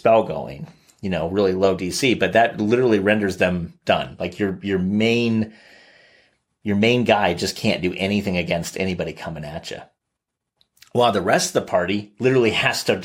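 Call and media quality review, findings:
No audible faults found in this speech recording; no defects to attribute to any component.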